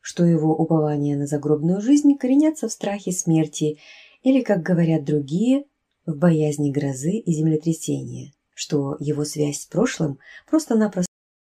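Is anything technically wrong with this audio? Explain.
Yes. The clip has a cut-off end at 11.06 s. The sound stops in the middle of what it is doing and drops straight to digital silence, with no decay or release tail, and that silence runs for about 0.4 s to the end of the file. This happens when the final buffers of audio are never written out or played back, so the recording ends on a hard truncation instead of letting the sound finish.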